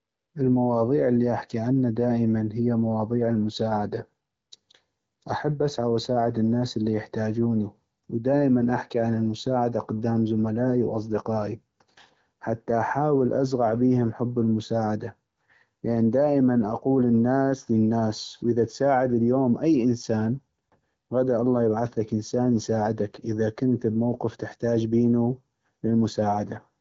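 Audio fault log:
Nothing stood out on listening to this speech recording.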